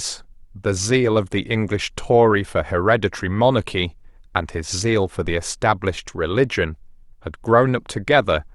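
A phantom power thump lands at 5.26 s and dies away by about 5.40 s: switching a supply on or off on the live input sent a voltage step through the coupling capacitors, producing a deep low thud peaking near -21 dBFS with a fast 30 ms decay.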